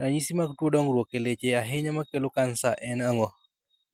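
No technical faults are audible.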